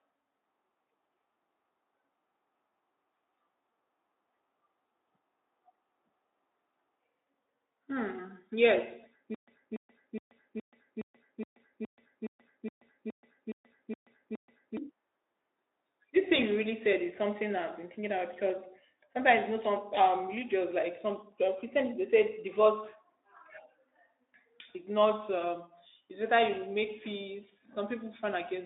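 It's a speech clip, and from 9.35 to 14.77 s it falls into a stutter with silent gaps: a 286 ms fragment repeats 13 times, each followed by about 131 ms of dead silence (a 417 ms cycle), likely a stalled stream replaying its last buffer while the real audio is lost. It's band-limited Speex, with nothing above about 3.8 kHz.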